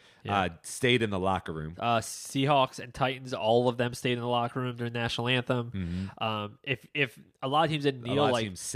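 No audible faults in this speech.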